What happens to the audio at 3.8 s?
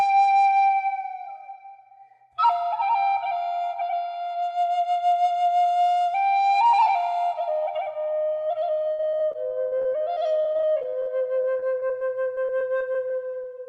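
Nothing goes wrong at 3.8 s; the sound passes through intact there, carried by the call codec without any dropout, glitch or distortion at that point.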